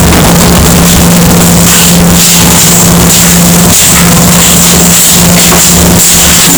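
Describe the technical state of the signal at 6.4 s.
At 6.4 s, as throughout, the sound is very loud, harsh distortion, likely from signed and unsigned 16-bit samples being mixed up, which turns each zero crossing into a jump across the whole range. Unlike clipping, quiet moments are as loud as the rest.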